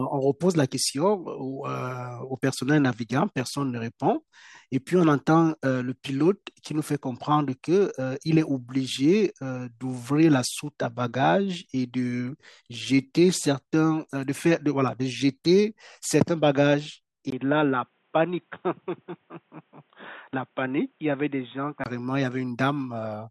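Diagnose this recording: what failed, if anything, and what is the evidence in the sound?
At 17.30 s there's a gap of about 20 ms, then the speech turns dull and boxy, with nothing above 3.8 kHz, a few dB quieter and faint new background noise, until 21.86 s. Most likely the input switched to a poorer device at the driver stage.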